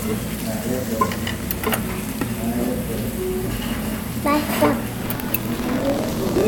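From 4.97 s to the end, a rattling robotic buzz at about 43 Hz rides on the sound. This is buffer tearing: writer and reader have slipped, so roughly a tenth of each period, which fits a 1024-sample buffer, replays audio about 100 ms old between hard joins.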